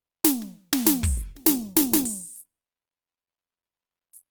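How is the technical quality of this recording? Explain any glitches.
The music loses quality partway through. From 1.17 s to the end, an adaptive stream at a lower bitrate takes over abruptly and without a gap. Coding artefacts rise, which fits a switch from roughly 64 to 16 kbit/s Opus.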